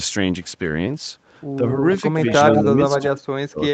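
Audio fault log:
2.28–2.63 s and 2.89–3.06 s, echo leak: The far end's echo canceller likely failed to remove what its microphone picked up from its own loudspeaker, so part of that sound was sent back down the line. A copy of the speech returns 118 ms late. In the first stretch it is about as loud as the direct speech, so the two smear together. In the second it sits about 15 dB lower as a faint trailing shadow.
2.62–2.69 s and 2.99–3.73 s, speech suppressed in double talk: With both sides talking at once, the echo canceller likely could not separate its own talker from the returning echo and turned everything down. At 2.62 s the speech dips only a few decibels for a brief moment. From 2.99 s to the end the drop deepens to about 40 dB, so the speech all but vanishes.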